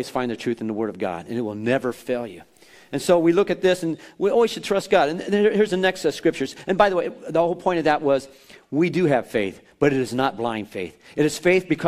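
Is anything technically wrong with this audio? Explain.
Yes. From 1.75 to 3.25 s the audio turns grainy, with a rough distortion that rises and falls with the sound and is worst in the quietest passages, where low-level detail breaks up or sputters. This is most likely low bit depth without dither: the samples were truncated to a coarse grid, roughly consistent with 10 bits. With no dither to decorrelate it, the rounding error tracks the waveform, sitting around 45 dB below the signal.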